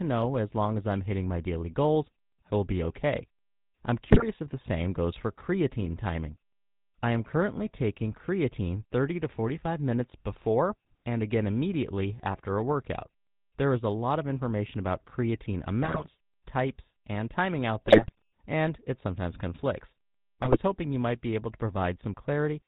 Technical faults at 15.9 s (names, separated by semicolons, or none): GSM full-rate codec; GSM bit errors